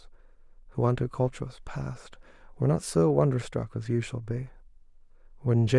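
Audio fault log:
Nothing stood out on listening to the speech here.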